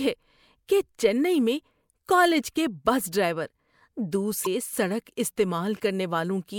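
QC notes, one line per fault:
4.43–4.47 s, damaged data in a compressed stream: corrupted frames make the decoder misread the data and lose sync, giving a brief glitch in the speech.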